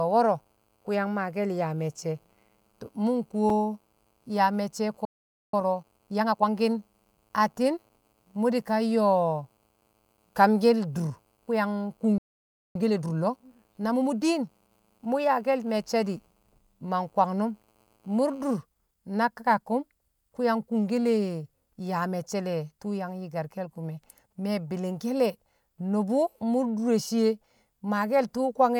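A speech recording with three kinds of fault. At 3.50 s there is a block of digital silence: a 5.3 ms hole where the signal drops straight to silence and returns with no fade. Its length fits a 256-sample block the output buffer didn't receive in time. Two playback stalls follow, from 5.05 to 5.54 s and from 12.18 to 12.75 s, right after "yang kung". The speech halts mid-flow for about 0.48 s and 0.57 s and then resumes where it stopped, the likely cause being the player running out of data or its thread being blocked. Each stall is followed by time-compressed catch-up as the player cuts and cross-fades small pieces to clear its backlog. From 5.54 to 6.50 s the speech runs at 1.5 times normal speed, and from 12.75 to 15.01 s, ending around "mṵ yaake̱l me̱cce̱ di̱", at 1.25 times. In both stretches the pitch stays unchanged.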